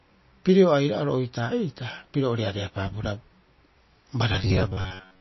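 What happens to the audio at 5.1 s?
Robotic sound from repeated short buffers covers 4.32 to 5.21 s, so it is present at 5.1 s. New audio seems to be arriving too seldom, and the gap is filled by replaying the same short slice while the real signal is skipped, for most of that stretch. The repeats impose a steady buzz at 93.8 Hz, which fits a repeated chunk of about 10.7 ms. The result is a rigid, metallic drone that still loosely tracks the speech, most likely caused by a starved playback buffer.

MP3 compression damage also runs through the whole clip, including this moment. Nothing is present above 5.8 kHz, so the treble is cut off flat. The encoder has also zeroed weak frequency lines that flicker in and out between frames, giving a watery, swirling texture and smeared consonants. The damage is plainly audible and points to a likely low bitrate of around 25 kbps.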